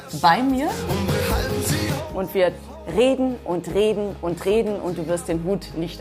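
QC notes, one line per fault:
0.0–2.0 s, pre-emphasis left on: the treble boost was never cut back, so it sits about 8 dB up at 10 kHz, which fits CD 50/15 µs emphasis. It rises as a smooth shelf rather than a narrow EQ peak.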